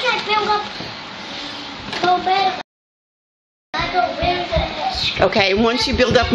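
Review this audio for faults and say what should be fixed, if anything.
The player's buffer ran dry at 2.61 s, a rebuffering stall, and it waited for more downloaded data before continuing at 3.74 s. The sound drops to silence for about 1.1 s and then picks up exactly where it stopped, so nothing is missing but the clip runs longer. A deeper playback buffer or adaptive bitrate switching would keep data ahead of the playhead and prevent the stall.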